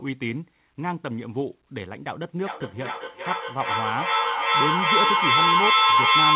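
From 2.42 s to the end, a microphone-to-loudspeaker loop gains level on each pass, causing feedback howl: repeats grow rather than fade, narrowing to a tone around 1 kHz that pulses roughly every 0.4 s and peaks at about 9 dB above the speech.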